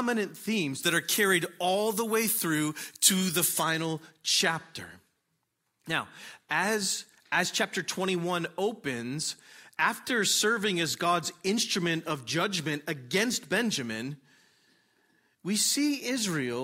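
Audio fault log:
0.83–3.63 s, pre-emphasis left on: the treble boost applied before recording or transmission was never undone by the matching de-emphasis, so highs stand about 13 dB above 1 kHz at 10 kHz, a rise that fits the 75 µs FM curve, making the sound thin, bright and sibilant.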